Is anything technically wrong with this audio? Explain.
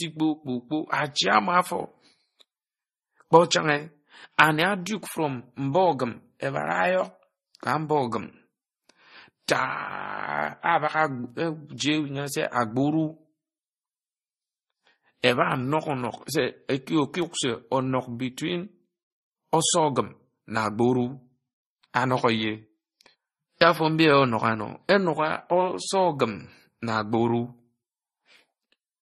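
Yes. Throughout the speech there is a hard ceiling at about 12.5 kHz, with nothing above it. The artefacts are layered: the artefacts of the different codecs are heard together. This is likely transcoding between lossy codecs, which fits a low-rate MP3 stage followed by Vorbis at a similar low rate. The second encoder wasted bits re-coding the first one's artefacts and added its own, and the lower band limit carried through.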